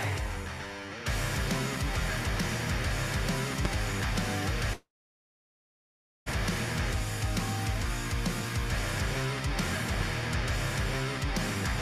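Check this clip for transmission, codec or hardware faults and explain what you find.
Three faults stand out: two loud pops and one long network dropout.

Loud pop, 3.65–3.68 s and 9.94–10.03 s: likely a voltage spike from a switch, plug or static. It is a single sharp thump about 20 dB above the sound, then a double pop about 10 dB up, with the audio continuing underneath.

Long network dropout, 4.73–6.32 s: likely a long gap in packet delivery. A fading fill covers about 1.57 s, about 1.38 s of it silence, and 1.0 s of audio is lost. Playback resumes roughly half a second later in its timing.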